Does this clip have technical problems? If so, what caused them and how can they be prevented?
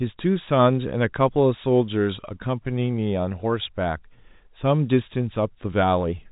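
No, the speech shows no technical problems: it has the sound of ordinary G.711 telephone coding, with nothing heard above about 3.8 kHz, which is simply the bandwidth of that telephone format.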